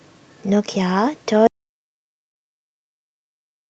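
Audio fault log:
1.47–3.70 s, audio dropout to silence: speech cuts off mid-flow into silence, likely from lost input; waveform goes flat, spectrogram fully blank, no room tone.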